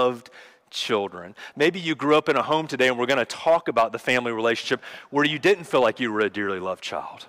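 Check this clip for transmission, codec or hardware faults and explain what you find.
Hard clipping runs through the whole speech clip. The signal is driven roughly 6 dB past what one stage in the chain can pass, so the loudest peaks are sheared off flat, affecting only a small share of samples, around one percent. Each flattened top adds harmonics high in the spectrum. The result is brief crackle and rasp on the strongest syllables rather than a continuous fuzz, since only the peaks cross the ceiling.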